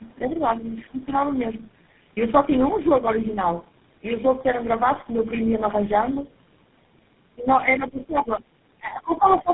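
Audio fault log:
throughout: tandem speech coding. The speech passes through several low-rate coders in series, likely including GSM full rate, each re-encoding the previous one's decoded output. Errors compound, so the speech sounds rough, muffled and warbly, with nothing above 3.8 kHz.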